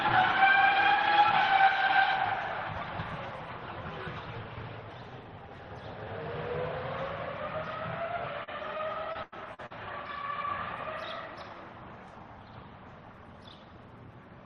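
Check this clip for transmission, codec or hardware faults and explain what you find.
One transmission fault is present. Repeated packet loss (robotic sound) from 8.43 to 9.72 s: six gaps, up to 93 ms, were patched by extending earlier audio, leaving choppy sound with pieces missing.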